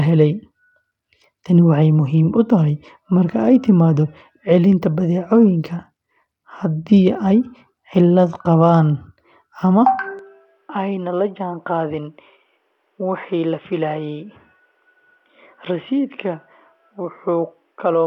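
Throughout the speech, the audio has likely passed through Bluetooth SBC compression at a starved bit allocation, which fits roughly 96 kbps. Coarse sub-band quantisation leaves plainly audible gritty noise and flickering treble, with nothing above 19.9 kHz.

At 10.19 s, the input likely switches to a poorer device and stays there to the end, with no gap at the change. The new path passes nothing above 3.8 kHz, so the speech turns dull and boxy, drops roughly 10 dB, and carries a faint new noise floor.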